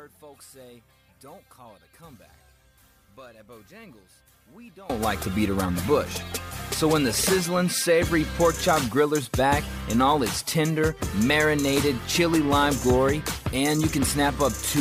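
From the start to 4.90 s, the mono sum drops by about 25 dB, likely because one channel is inverted: centred content cancels, unlike a plain level drop. From 8.15 to 10.24 s, a faint 8 kHz USB whine sits well below the sound; its fixed high pitch from bus microframes distinguishes it from low mains hum.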